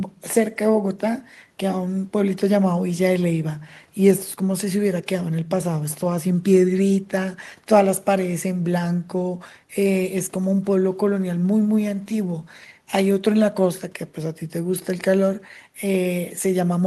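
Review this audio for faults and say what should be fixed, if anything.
Nothing stood out on listening to this speech recording, so there is nothing to fix.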